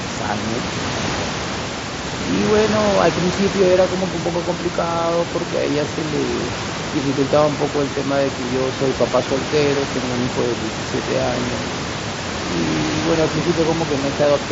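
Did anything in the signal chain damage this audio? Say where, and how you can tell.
No, nothing in the chain damaged this audio.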